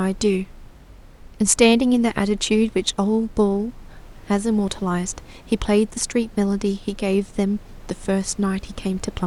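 Nothing stood out on listening to this speech; the only thing audible apart from the talker is the room's own background noise, sitting about 26 dB below the speech.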